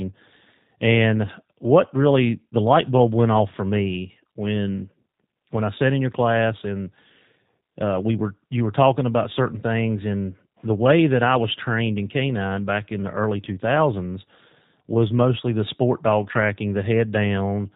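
G.729 codec damage runs throughout the speech: it is rebuilt from a vocal tract filter, pitch predictor and sparse pulses, which fits an 8 kbit/s G.729A stream. Everything above 4 kHz is gone, and the plainly audible result sounds rough and synthetic.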